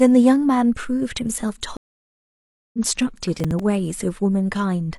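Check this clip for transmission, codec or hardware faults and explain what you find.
Two faults are audible in this speech clip.

From 1.77 to 2.79 s there is a stream reconnect. The connection dropped and the player fell silent for about 0.97 s. It then restarted decoding mid-stream. Speech resumes roughly half a second further on, so a short stretch is simply missing.

From 3.37 to 3.60 s there is processor overload crackle. The processor missed several buffer deadlines in a row, about five, with buffers of around 5 ms. Each miss replayed a fragment of old audio with hard edges. This produces a brief gritty tearing over the speech.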